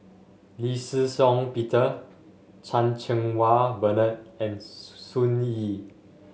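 No technical faults can be heard anywhere here.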